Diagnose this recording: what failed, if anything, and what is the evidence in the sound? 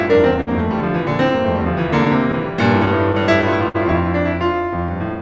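Clock drift between sender and receiver, at the network and jitter-buffer stage. The sender's clock runs roughly 4% slow, so the buffer keeps draining. The receiver must repeat short stretches of the music, which produces small timing hiccups at uneven intervals across the whole clip.

A short stall from a late packet, also in the jitter buffer, at 0.41 to 0.49 s. A packet arrived late and the buffer ran empty. The receiver held the last sound for 59 ms, then resumed from the same point. Nothing is lost, but the music hangs briefly.

A dropped buffer, heard at 0.80 s and again at 4.89 s, is likely an overrun in the driver or buffer stage. Each point has a jump forward of about 10 ms. The samples were overwritten before being read, and the two sides butt together.

Scattered short gaps, from the network, between 2.05 and 3.76 s. About seven small holes were patched by continuing the previous sound. 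Together they fill roughly 100 ms, and the longest is around 50 ms. They are heard as ticks and smears over the G.722 call path, which has nothing above 8 kHz.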